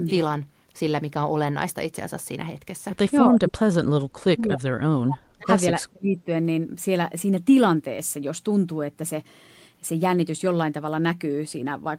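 Speech that gets pushed down in three stretches, from 3.29 to 3.79 s, 4.32 to 5.52 s and 5.79 to 6.3 s, dropping by as much as around 40 dB. It sounds like speech suppressed in double talk, likely an echo canceller clamping down while both ends spoke.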